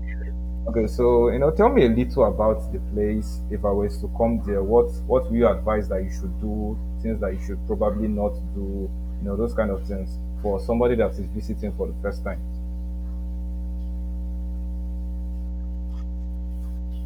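A steady low drone sits under the speech from start to finish, pitched at 60 Hz with a few low harmonics above it. It is loud, only a few decibels below the speech itself, so it fills the gaps between phrases as much as the talking. This is mains hum: the power line has leaked into the signal path, most likely through a ground loop or a nearby transformer, and it rides along at a constant level for the whole recording.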